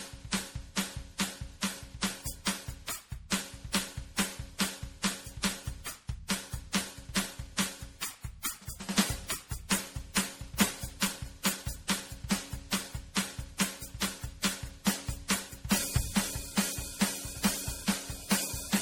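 Throughout the music, a swirly, hollow smear and blurred attacks mark generation loss, likely from around seven lossy passes consistent with 64 kbit/s MP3, each requantising on a shifted frame grid. A spectrogram shows flickering holes across the upper bands and nothing above 20.8 kHz.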